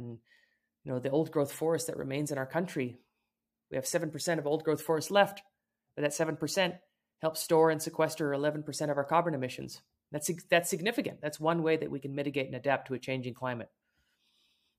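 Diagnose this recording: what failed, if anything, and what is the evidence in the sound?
Nothing in this speech recording points to a failure at any stage of the chain. No moment in the sound calls for a diagnosis.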